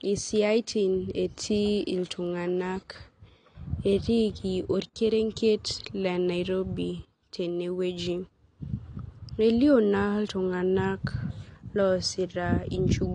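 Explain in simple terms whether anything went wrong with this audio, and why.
From start to finish the speech sounds dull and muffled, with a swirly, fizzy edge on hissing sounds and nothing above about 9.7 kHz. The likely cause is AAC compression, which shrank the file by throwing away high treble and fine detail.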